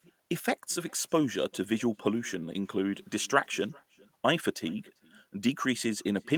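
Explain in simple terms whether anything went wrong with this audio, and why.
Throughout the speech, each phrase is followed by a faint, thin repeat of itself about 0.4 seconds later. This is echo with no canceller: the far end's loudspeaker fed the call back into its microphone, and nothing removed it. Room reverberation blurs straight into the sound, but this echo is a separate, delayed copy.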